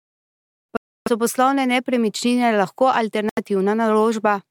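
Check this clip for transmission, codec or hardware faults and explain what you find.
Two dropouts interrupt this speech clip, both typical of a Bluetooth stall. From 0.77 to 1.08 s the sound cuts to about 0.3 s of silence just before "so poslovne nepremičnine lahko", and from 3.29 to 3.38 s a shorter gap of about 80 ms follows those same words. Each time the audio halts and resumes rather than fading. The likely cause is radio interference delaying packets until the receiver's buffer emptied and playback paused for retransmissions.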